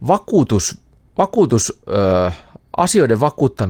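At 1.21 s, packets were lost in transmission, which fits two separate 20 ms frames. Each missing stretch was a lost packet rebuilt from error correction. The packet that followed carried a low-bitrate backup copy, and the decoder played that copy instead of leaving a hole. As a result, the speech runs on without any gap until 1.27 s. For those 40 ms, though, it turns rougher and noisier before clean decoding resumes.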